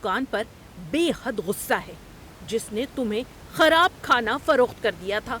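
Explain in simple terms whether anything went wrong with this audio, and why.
Nothing went wrong with this speech recording; the faint background noise is just the room the microphone was in, well below the voice.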